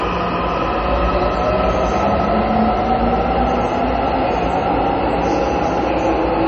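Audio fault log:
Throughout, MP3 compression: the sound is dull and watery, with nothing above 8 kHz, a swirling, bubbling texture as faint detail flickers in and out, metallic chirps on bright, hissy parts, and sharp onsets smeared rather than crisp. This is likely heavy MP3 encoding at a low rate, which fits a bitrate around 32 kbps. Starved of bits, the encoder cut everything above 8 kHz and dropped weaker frequency components frame by frame.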